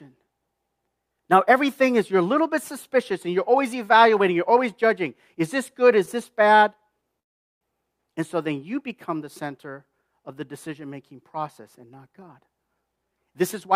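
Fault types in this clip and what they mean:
Call audio freeze: From 7.19 to 7.63 s the speech stops dead for about 0.42 s. Almost all of that stretch is silence rather than a fading buzz, and then the speech resumes exactly where it left off, with nothing skipped. The likely cause is packets held up in transit, which let the jitter buffer run dry. The receiver stretched the last sound briefly before it faded to silence while waiting, so the pause was inserted into the audio rather than cutting any of it away.
Jitter buffer speed-up: From 12.29 to 13.74 s the speech sounds rushed, running at about 109% of normal speed while the pitch stays where it was. The receiver's buffer was holding more audio than its target. To shrink that delay it trimmed many tiny slices, each a pitch period or so long, removing roughly 0.15 s in total across that stretch.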